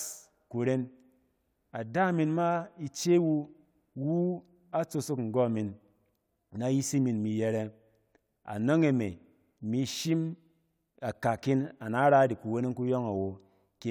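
No technical faults can be heard anywhere in the speech. Nothing in the sound at any point suggests a problem along its path.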